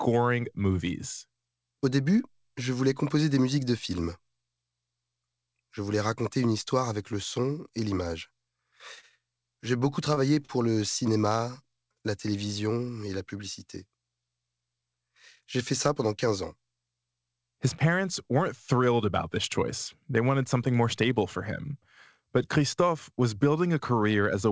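A packet arriving late let the jitter buffer run dry four times, causing a short stall from a late packet at 8.99 to 9.20 s, 10.15 to 10.20 s, 10.35 to 10.40 s and 10.46 to 10.52 s. The receiver held the last sound for 38, 20, 20 and 31 ms and then resumed where it had stopped, so no speech is lost. Each stall is heard as a briefly drawn-out sound with a faint buzz or dip, clustered in the second burst, all within G.722 speech that stops at 8 kHz.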